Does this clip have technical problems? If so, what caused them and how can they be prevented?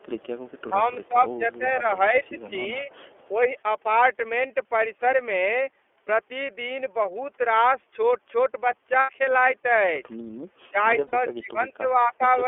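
Yes. Throughout the speech the sound is narrow, a little rough and synthetic, with nothing above about 3.4 kHz and little below 300 Hz. This is the iLBC codec at work. It codes each 30 ms frame's excitation on its own, at a low rate that fits its 13.33 kbps mode, inside a telephone band, and the coding damage is plainly audible. Prevent it by negotiating a wideband codec such as Opus when both ends support it.

A very faint delayed copy of the voice, roughly 35 dB below the speech and trailing by 446 ms, surfaces at 0.00 to 0.61 s, 1.03 to 1.08 s, 2.24 to 2.42 s and 2.92 to 3.28 s. This is echo leak. The likely cause is a far end playing the call on a loudspeaker whose echo canceller left residue from its microphone, which was then sent back. Prevent it with headsets at that end or a better-tuned echo canceller.

The voice dips while the other side is talking: across 0.69 to 2.90 s, by roughly 10 dB over about a second and a half in total; briefly at 3.31 to 3.56 s, by around 5 dB; and at 10.71 to 12.31 s, by up to roughly 15 dB over about a second. 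This is speech suppressed in double talk. The echo canceller likely could not separate this talker from loudspeaker echo, so it turned both down. Prevent it with full-duplex-capable echo cancellation or headsets that remove the echo path.

At 9.00 to 9.10 s, about 90 ms long, and at 11.07 to 11.13 s, about 60 ms long, the voice turns into a brief held, buzzy or breathy vowel and then snaps back to normal almost at once. These are lost iLBC frames, fitting three and two lost 30 ms frames. The decoder filled each gap by repeating the last pitch cycle mixed with noise. Because each frame decodes independently, the voice recovers immediately afterwards. Prevent it by improving network reliability and adding a jitter buffer or forward error correction.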